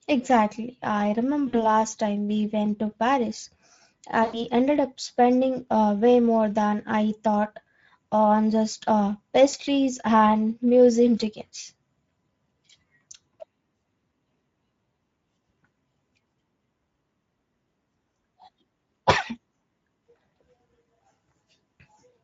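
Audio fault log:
throughout: Speex codec. The speech sounds noisy and hoarse, with a grainy buzz riding on it, which fits a mid-low Speex setting of about 16.8 kbps. The excitation gets too few bits, so the spectrogram shows blurred harmonics with noise filling the gaps between them.
1.47–1.71 s, 4.23–4.42 s, 9.49–9.55 s: VoIP packet loss concealed by the speech codec. The gaps are 60, 100 and 40 ms, heard just before "time we went to", before "ended up spending uh", and between "thought on just uh" and "and museum tickets". In each, the decoder extrapolates from the last pitch and filter into sound that fades, and the sound stays weak briefly afterwards. The waveform tapers.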